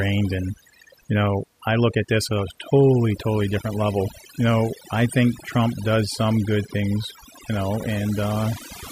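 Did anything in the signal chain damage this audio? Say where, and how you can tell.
Yes. Overdone noise removal in the call processing stage runs through the whole speech clip. The background drops and breaks up into twinkling specks. Unlike codec artefacts, the noise floor itself has been gouged out, band by band.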